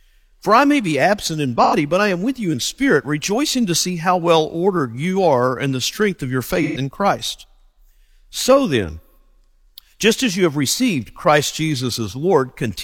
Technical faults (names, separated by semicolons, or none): AAC frame loss with concealment